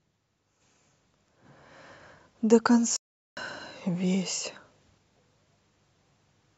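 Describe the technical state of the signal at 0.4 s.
At 0.4 s the speech signal is intact, with no dropout, distortion, glitch or other fault audible at that moment.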